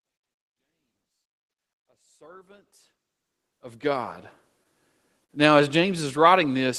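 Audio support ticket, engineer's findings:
Short stall from a late packet at 5.24 to 5.32 s. Jitter buffer ran empty and held the last sound 45 ms, then resumed. Nothing lost.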